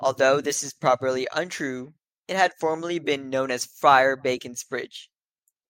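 Nothing technically wrong can be heard in this speech recording: the signal holds steady and continuous throughout, with no disturbance at any point.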